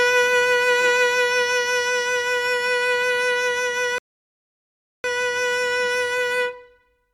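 At 3.98 s the music drops to silence until 5.04 s, a rebuffering stall: the player exhausted its downloaded audio and paused, adding about 1.06 s before resuming exactly where it stopped. The waveform shows a flat gap, the spectrogram a blank vertical band.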